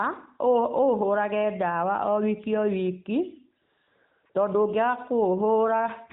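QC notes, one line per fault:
3.62–4.26 s and 4.30–4.34 s, AMR comfort noise: speech frames stop for 640 ms, then briefly for 40 ms, and the receiver fills each gap with smooth synthetic hiss in place of the real background, unlike a dropout, which would leave dead silence, over the light AMR-NB coding.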